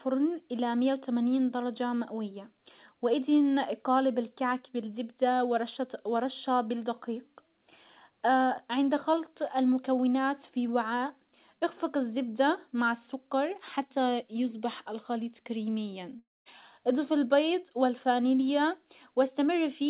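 At 16.19 s, right after "حتى يصبح الخليط كريميا", the speech breaks off. The last sound is stretched into a buzzy or hissy tail that fades, then goes silent. The gap lasts until 16.48 s, when the audio resumes at "اضف البيض والفانيليا". About 270 ms of speech is gone. This is likely a long network dropout, with the receiver filling the hole until nothing was left to extend. The call path's band limit is audible too: nothing above 4 kHz, which fits G.711 A-law at 64 kbps.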